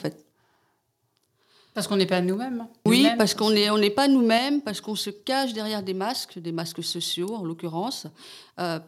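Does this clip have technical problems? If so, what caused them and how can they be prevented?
Yes, there are two problems.

Microphone overload, from 2.9 to 3.22 s, just before "hein qu'on n'est on". The input gain was likely set too high, so the speech peaks drove the converter about 3 dB past its ceiling and their tops were sliced flat. Only a small fraction of samples, under one percent, are cut, but that is enough to give the loudest syllables a harsh, crackly edge. Setting the microphone's input level so peaks stay well below full scale prevents this.

Microphone volume stepped down at 4.38 s, between "n'est on n'est pas" and "parce qu'on se cache". The call software likely reacted to the earlier overload by lowering the device's input volume in a single jump of about 4 dB. The speech and the room behind it both drop in level at once, an abrupt step rather than a gradual fade. Turning off automatic microphone gain adjustment in the call software and fixing a sensible level by hand prevents this.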